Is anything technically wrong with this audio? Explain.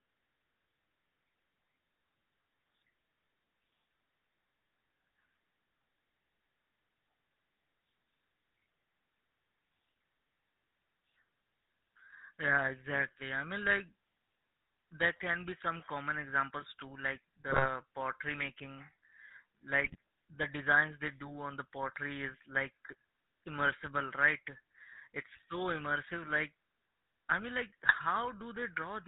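Yes. Throughout, the speech carries GSM full-rate codec damage: a buzzy, gravelly roughness and nothing above 4 kHz. This fits the 13 kbps GSM coder's pulse-driven vocal-tract model, unlike the smeared swirl of modern codecs.

GSM bit errors break in at 17.5–17.69 s (between "common examples too like" and "pottery making"), 19.84–19.96 s, and 27.86–27.95 s (after "i mean like"). Corrupted filter, pitch and gain values over a few frames produce squawks and gargling bursts, not the clean silences of dropped packets.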